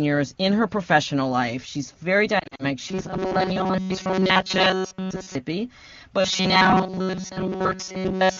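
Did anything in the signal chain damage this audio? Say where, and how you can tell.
Yes. At the radio and network stage, speech frames were lost between 2.40 and 2.65 s. About 120 ms of audio went missing, scattered across roughly 200 ms, with the longest gap about 40 ms, which fits a handful of 20 ms AMR frames failing their checks. For each lost frame the decoder repeated the last good pitch and vocal tract settings at falling gain, so the speech dips and warbles briefly there and drops to near silence in the two-frame gaps.

From 2.89 to 5.35 s and again from 6.20 to 8.39 s, the speech becomes a rigid, metallic buzz fixed at 188 Hz that still roughly follows the speech. This is robotic sound from repeated short buffers, likely at the driver or buffer stage. New audio arrived too seldom, so a slice of about 5.3 ms was replayed over and over, and most of the real audio in those spans was skipped. 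That repeat period sets the fixed pitch. The AMR wideband (HD Voice) codec underneath keeps the full wideband clarity.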